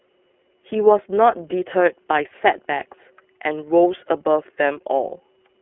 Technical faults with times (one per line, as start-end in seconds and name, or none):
0.00-5.61 iLBC codec